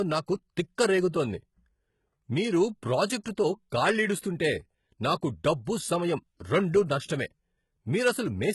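Throughout the speech, the treble sounds synthetic: s sounds turn gritty and lispy, and nothing reaches above 11.8 kHz. The likely cause is HE-AAC compression, whose copied-up treble fits a very low bitrate. A spectrogram shows smeared, blocky upper bands ending at a hard ceiling.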